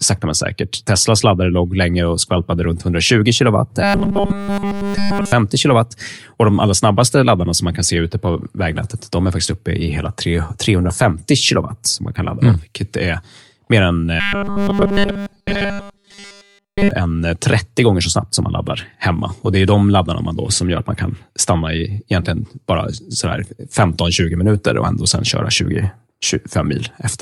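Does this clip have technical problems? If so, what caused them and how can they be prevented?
Yes. Robotic sound from repeated short buffers occurs from 3.83 to 5.32 s and from 14.2 to 16.91 s. The speech turns into a rigid, metallic 200 Hz buzz, likely because audio arrived too seldom and nearly every stretch was filled by looping the last 5 ms. A spectrogram shows evenly spaced horizontal lines at multiples of 200 Hz, and the waveform shows one short cycle repeating. A larger jitter buffer and more processing headroom would prevent it.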